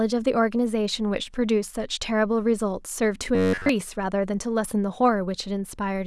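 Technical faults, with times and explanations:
3.35 to 3.69 s, robotic sound from repeated short buffers: the speech becomes a rigid metallic buzz at 93.8 Hz, likely from late audio being covered by looping a slice of about 10.7 ms for the whole stretch. The waveform shows identical repeating cycles, and the spectrogram shows flat, evenly spaced harmonics.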